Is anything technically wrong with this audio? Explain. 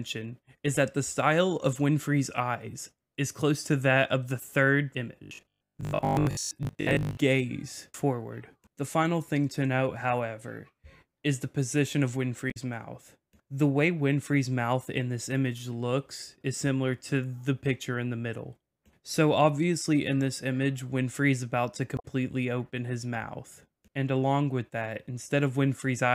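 Yes, two kinds of fault are present.

From 5.23 to 7.17 s the audio takes on a rigid, metallic buzz at 50 Hz: robotic sound from repeated short buffers. The likely cause is audio arriving too seldom, so the player keeps replaying a 20 ms slice for most of that stretch while the real audio is skipped. Unlike codec damage, it is a sustained buzz at a fixed rate.

At 12.50 to 12.57 s and again at 21.96 to 22.05 s there is damaged data in a compressed stream. The decoder misreads corrupted frames and resynchronises at the next header, which is heard as a chirp, squawk, click or short hole. These events are brief and isolated, not a steady buzz.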